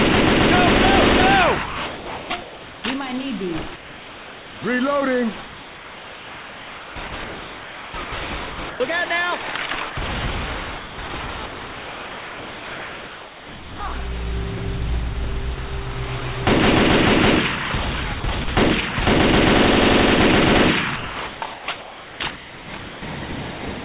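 From 1.66 to 2.3 s the sound disappears and steady hiss takes its place. This is sound dropped by the voice detector, which likely mistook the sound for background and stopped sending. The hiss continues to 2.84 s. From 3.76 to 4.62 s the background again turns flat and featureless, about 3 dB quieter. Both stretches are comfort noise in place of the background, likely synthetic fill generated while transmission paused. Between 5.46 and 8.8 s the sound turns choppy, with holes filled by hiss. This is sound chopped by the voice detector, which likely toggled sending on and off repeatedly. At 9.9 s a 60 ms gap appears, likely another drop by the voice detector. The same choppy holes, likely from the detector switching, return from 10.78 to 13.8 s, briefly from 18.2 to 18.48 s, and from 20.96 to 23.02 s. Throughout, nothing is audible above 4 kHz, which fits a narrowband call codec such as G.711.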